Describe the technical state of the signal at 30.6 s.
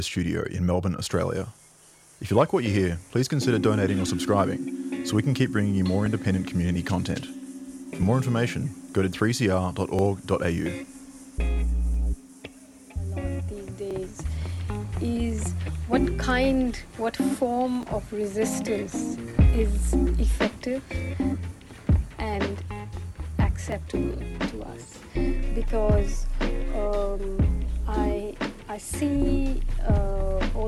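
At 30.6 s the signal is intact, with no audible fault at that moment.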